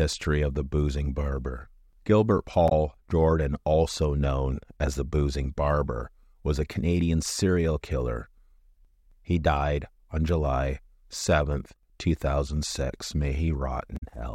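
A brief glitch cuts into the speech at 2.68 to 2.72 s, and a second one at 13.96 to 14.03 s. Both are damaged data in a compressed stream: corrupted bytes make the decoder misread frames and lose sync until it finds the next valid frame header.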